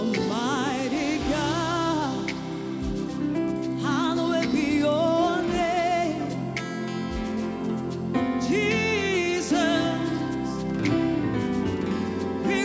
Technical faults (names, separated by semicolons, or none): resampler restarted on every block